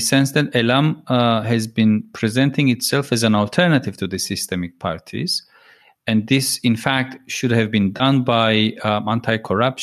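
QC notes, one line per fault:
7.97–8.02 s, AAC frame loss with concealment: 30 ms of frames dropped and the decoder refilled them from the last good spectrum, leaving a brief smeared patch.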